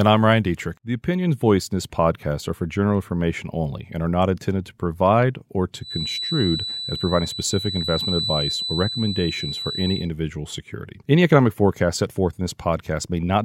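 From 5.78 s to 10.1 s a thin, steady whistle at 4 kHz sits behind the speech, about 10 dB below it and swelling and fading slowly in level. This feedback whistle likely comes from a loudspeaker-to-microphone loop held at the edge of feedback without running away.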